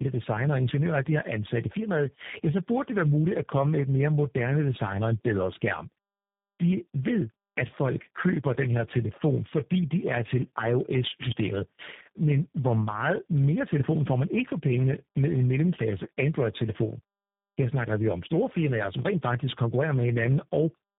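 Throughout the speech, tandem speech coding is audible: the signal sounds like it passed through several low-rate speech codecs in a row, each one re-encoding the previous one's already damaged output. The losses compound. The speech turns rough and gritty with a warbling, watery quality, and the band stops at 3.7 kHz, so everything sounds muffled. The texture fits ADPCM stages followed by a CELP coder such as G.729A, roughly four coding passes deep.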